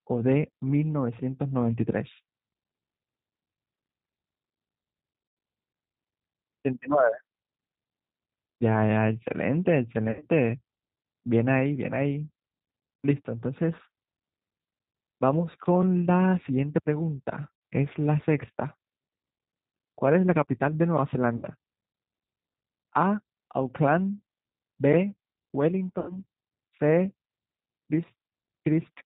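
It's a speech recording that's been through the G.729 codec the whole way, and the codec damage is plainly audible: everything above 4 kHz is gone, and the voice has that slightly rough, synthetic edge from being rebuilt out of a vocal tract filter, a pitch predictor and a few pulses per 10 ms frame. That fits an 8 kbit/s G.729A stream. On top of that there's VoIP packet loss concealed by the speech codec, five times. The gaps are at 5.28–5.37 s (about 90 ms), 10.08–10.27 s, 17.56–17.62 s (60 ms), 21.37–21.45 s (60 ms) and 25.99–26.16 s (about 90 ms). The one at 10.08 s is 110 ms of loss scattered over about 140 ms, with the longest run 80 ms. In each, the decoder keeps stretching its last pitch and filter with falling gain, so the sound smears into a buzzy tone or coloured noise that fades. Because each frame leans on the previous one, the voice stays weak or off for a short while after the packets come back.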